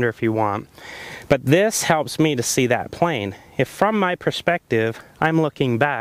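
Nothing stood out on listening to this audio.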